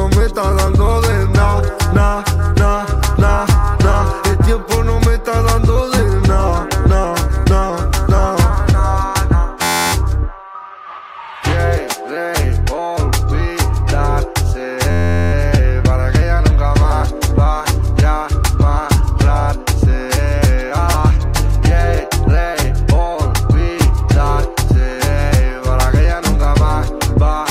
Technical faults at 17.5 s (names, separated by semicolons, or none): none